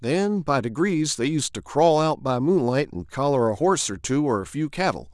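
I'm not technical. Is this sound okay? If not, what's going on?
Yes, this sound is okay, with nothing going wrong that needs explaining.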